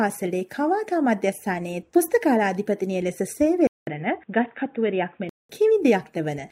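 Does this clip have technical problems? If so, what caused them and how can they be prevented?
Yes. From 3.67 s to 5.49 s the sound turns dull and boxy, with nothing above 3.8 kHz, and a gap of about 200 ms of silence opens at the switch. The level stays about the same, and a faint new noise floor sits well below the signal. This is likely an input switched to a poorer device. On a spectrogram the upper band is cut flat, and the waveform shows a short flat gap. To prevent it, lock the recording to one fixed input device.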